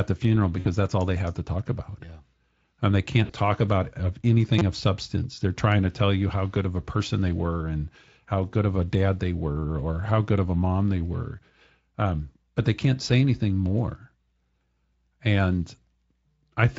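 At 0.59 s, just after "the funeral" and before "that's all they have", VoIP packet loss concealed by the speech codec fills a gap of about 60 ms, which fits three lost frames. The decoder carries its last pitch and filter forward at falling gain, so the sound stretches into a tone or coloured noise that fades. The same happens at 3.25 s, just before "talk about of", over about 40 ms. On a spectrogram each gap shows smeared, repeated harmonics or flat noise bands dimming out, and the waveform envelope tapers instead of following the speech.

At 4.59 s, between "talk about of" and "of substance", a repeated buffer plays a 5.8 ms slice four extra times, which fits a 256-sample buffer, and roughly 20 ms of new audio is lost. The joins are hard, so it comes across as a brief buzz or click. On the waveform the identical short cycle repeats with discontinuities at each seam, and on the spectrogram it appears as a narrow vertical band with harmonics spaced at about 170 Hz. 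The Speex coding at 27.8 kbps leaves only light codec damage.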